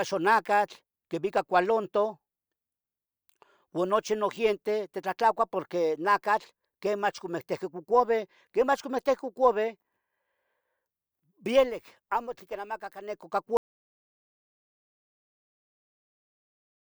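At 13.57 s the speech cuts off mid-flow and never comes back. What follows is an audio dropout to silence running right to the end of the clip, about 3.4 s of silence with no room tone or hiss at all. That dead-flat quality means the input itself was lost, most likely a disconnected device, a dropped link or an accidental mute, while the recorder kept writing samples. Whatever was said after that point is simply gone.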